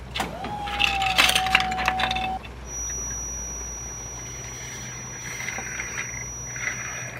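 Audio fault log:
2.62 s to the end: feedback whistle, a thin tone near 5.8 kHz about 10 dB under the sound, swelling and fading slowly in level, likely a loudspeaker-to-microphone loop held just at the edge of feedback. Unlike a runaway howl, it never builds.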